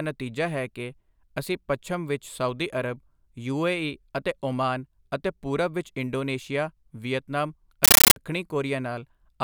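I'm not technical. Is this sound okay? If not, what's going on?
No. From 7.84 to 8.16 s the speech gives way to loud, harsh chattering static. This is a compressed stream played as audio. Encoded data, likely Dolby Digital, was played as sound without decoding. Each 13.3 ms burst of noise repeats 31 times a second.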